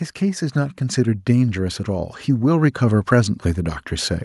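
From 0.19 s to 3.83 s the level climbs steadily. This is automatic gain rising. The gain control judged the incoming speech too quiet and turned its gain up slowly, by about 7 dB over more than three seconds. Because the whole signal is scaled, the voice and the background noise swell together. The room grows louder along with the talker. The rise is smooth, with no sudden step.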